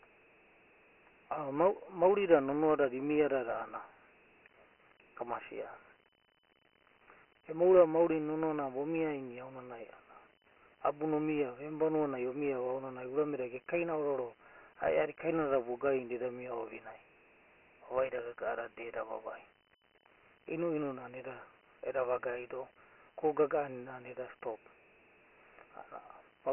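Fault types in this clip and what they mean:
Dialogic VOX ADPCM: speech squeezed into 4-bit ADPCM, fitting a 6,000-samples-a-second rate, loses everything above 3 kHz and carries a heavy gritty hiss behind it.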